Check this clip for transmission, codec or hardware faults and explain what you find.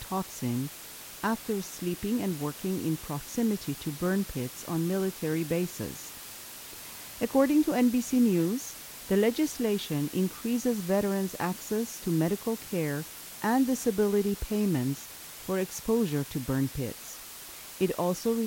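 The speech has one fault, present from start to finish: low bit depth with dither. The signal fits a 6-bit word, with dither added before rounding. This turns the coarse rounding error into steady white noise, only around 15 dB below the speech. It sounds like a constant, even hiss with no distortion. On a spectrogram it appears as a flat, uniform haze across all frequencies, and the waveform shows a thick noise band that persists through pauses.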